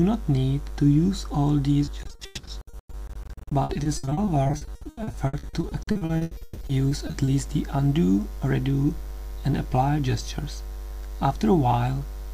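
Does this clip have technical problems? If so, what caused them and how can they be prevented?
Yes. From 1.85 to 7.29 s there is repeated packet loss, giving a robotic sound. Dozens of short dropouts, up to 140 ms each, are patched by stretching the last sound, about 38 percent of that stretch. Pieces go missing. A steadier network connection with a larger jitter buffer prevents this.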